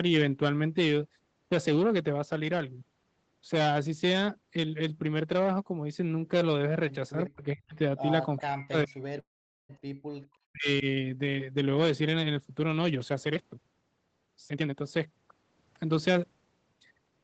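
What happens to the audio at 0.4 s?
At 0.4 s the speech passes through intact, with no fault at that moment beyond the normal call processing, which keeps the sound below about 8 kHz.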